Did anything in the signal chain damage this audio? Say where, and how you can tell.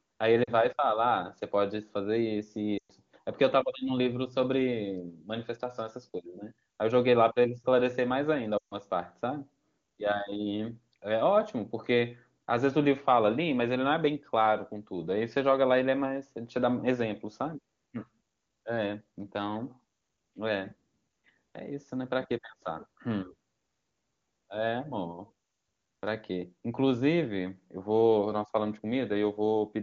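Yes, in the radio link, through lost AMR speech frames. At 0.43 to 0.50 s there is a brief 40 ms drop to near silence. At 2.77 to 2.92 s (120 ms) and 8.57 to 8.74 s (140 ms), the sound drops to near silence within two frames before speech returns weak or rough. The decoder is concealing frames that failed their error check by repeating the last good pitch and vocal-tract parameters at falling gain. The AMR-WB wideband codec itself sounds clean, which fits a high rate such as 23.85 kbit/s.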